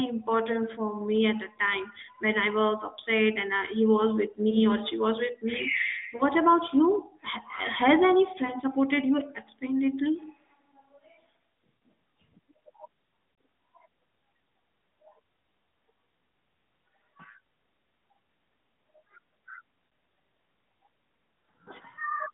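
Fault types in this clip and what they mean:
Lost AMR speech frames: the decoder covered corrupted frames by repeating the last good pitch and vocal-tract settings at falling gain, causing six brief warbling dips of 20 to 40 ms. Waveforms show a short sagging envelope; spectrograms show smeared, frozen harmonics at those moments.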